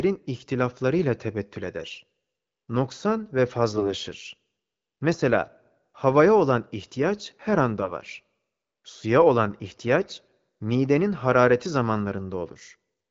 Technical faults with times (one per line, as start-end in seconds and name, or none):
3.69-3.93 AMR bit errors
7.82-7.93 AMR bit errors
10.00-10.32 AMR bit errors